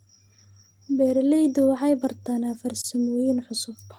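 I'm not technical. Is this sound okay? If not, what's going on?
No, there are three related timing problems in this speech recording.

Clock drift between sender and receiver runs through the whole clip. The sending device's internal clock ticks about 2 percent slower than the receiving one's, so sound arrives slightly more slowly than it is played out. The receiver's small holding area, the jitter buffer, keeps running low, and the receiver has to keep patching the gap. That patching causes the next problem.

Repeated timing corrections happen from 0.36 to 2.04 seconds. To keep up with the slow sender, the receiver repeats tiny slices of sound, adding about 40 milliseconds in total, so this stretch plays at roughly 98 percent of normal speed. Each repeat is small and unevenly spaced. You may notice a faintly unsteady pace or slight hiccups rather than any obvious glitch.

A short stall from a late packet occurs between 2.81 and 2.87 seconds. 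One chunk of sound arrived late, and the holding area ran empty. To avoid silence, the receiver stretched the sound it already had by 30 milliseconds until the chunk arrived, then carried on from the same point. Nothing is lost, but that moment is held a little too long and may carry a brief buzz or dip.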